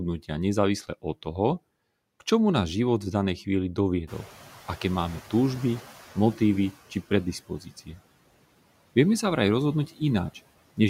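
Noise suppressor artifacts run through the whole speech clip. The background is pulled down by about 17 dB frame by frame.

Room noise jumps by about 19 dB near 4 s, to about 20 dB below the speech. Just after "život v danej chvíli", from 4.07 to 6.72 s, the noise suppressor is catching up. Its noise estimate lags, so the louder noise comes through with only about 10 dB of reduction. It then sinks over 2.65 s.

From 7.47 to 8.0 s, speech is cut by the noise suppressor. It mistakes parts of the voice for noise, turning them down by up to about 17 dB for roughly 0.3 s in total. Those sounds come across swallowed and faint.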